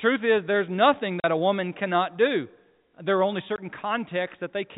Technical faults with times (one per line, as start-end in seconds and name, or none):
1.20-1.24 packet loss filled with silence
3.56-3.58 packet loss filled with silence